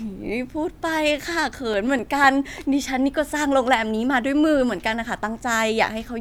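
Speech recording with CD scratch ticks from 1.48 to 2.24 s: four brief clicks, the longest about 4 ms, recurring once per disc revolution where a blemish overwhelmed error correction.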